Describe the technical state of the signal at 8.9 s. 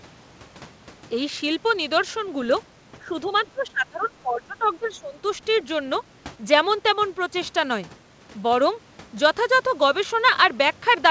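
At 8.9 s the speech is intact, with no dropout, glitch or distortion, only the normal sound of a call path that carries nothing above 8 kHz.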